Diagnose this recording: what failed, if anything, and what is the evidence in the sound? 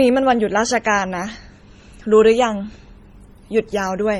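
The fault sits at the codec stage and runs through the whole speech clip. Two kinds of compression artefact are heard together. Nothing sounds above 18.3 kHz. This is likely transcoding between lossy codecs: a low-rate MP3 pass, then HE-AAC re-encoding its damage.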